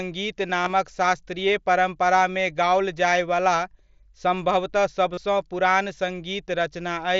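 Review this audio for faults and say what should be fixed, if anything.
Concealed Bluetooth headset packet loss shows up at 0.63 to 0.70 s, right before "शास्त्रीय परम्परामे गाओल", again at 3.10 to 3.12 s just after those same words, and at 5.13 to 5.18 s. Packets from the headset to the phone dropped out, and the receiver papered over each gap by repeating the best-matching bit of the last 20 ms or so. The first spot is a scatter of short losses, none much over 15 ms, while the third one loses about 37 ms. Keeping the headset close to the phone with a clear line of sight, and away from busy 2.4 GHz Wi-Fi, should prevent it.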